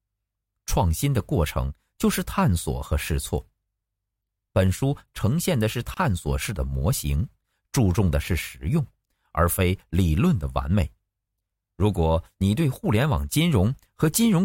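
Separately encoded pieces were joined untrimmed, leaving a gap at a join of encoded pieces: 28 ms of silence at 5.94–5.97 s, interrupting the speech.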